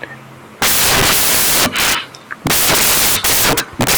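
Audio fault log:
throughout, samples built from the wrong bytes: loud white noise over the speech, because misassembled bytes turn each sample's noisy low bits into its largest part.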